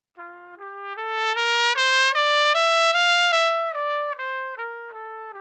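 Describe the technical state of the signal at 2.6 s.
At 2.6 s the audio is intact, with no dropout, click or other fault in the sound at that moment.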